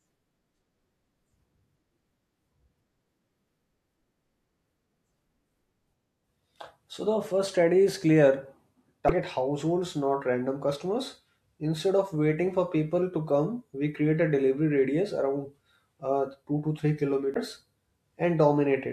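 It's a speech recording with two short bursts of damaged data in a compressed stream, at 9.06 s and 17.32 s, each lasting about 40 to 50 ms. Corrupted bytes made the decoder misread frames and lose sync, so you get a brief glitch.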